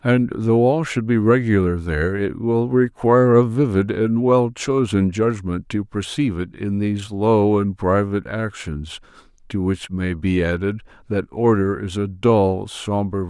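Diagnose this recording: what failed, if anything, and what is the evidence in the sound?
Nothing in the signal chain has failed: the speech signal arrives continuous and intact, with no stage of the path leaving an audible mark on it.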